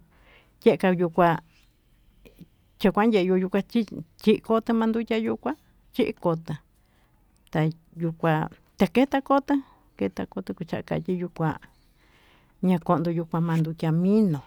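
No technical faults are audible.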